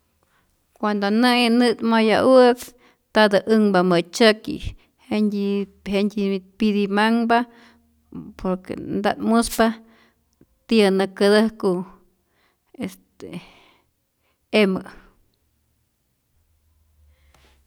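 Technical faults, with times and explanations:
2.55 to 2.71 s and 9.46 to 9.62 s, wireless microphone noise hit: two brief bursts of static, each about 0.16 s, the first ending just before "ntatä änhpa". The analogue FM radio link faded as reflected paths cancelled, so receiver noise rose.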